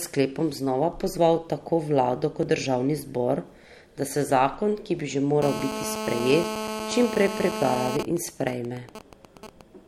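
A speech recording with three faults. At 2.43 s, between "znova pozval tako vlado" and "kot državni zbor", the sound jumps ahead by a few milliseconds with no gap of silence. The likely cause is a dropped buffer (overrun), where samples were overwritten before being read. That seamless skip distinguishes it from a dropout, which would leave a hole. From 5.42 to 7.97 s, starting just after "ki bi že", a hard, raspy GSM phone buzz at 217 Hz with dense harmonics sits about 6 dB below the speech. It comes from a nearby 2G phone in a call whose transmit bursts are rectified by the audio circuit. It is continuous, and its pitch and texture are unrelated to the speech. From 7.99 to 9.61 s it becomes GSM signalling bursts, even ticks with a longer 217 Hz buzz twice a second, about 10 dB below the signal. The phone is still in the call, but its user has fallen silent, so it transmits only intermittent burst groups. 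The broken, rhythmic pattern distinguishes this from the steady buzz before it.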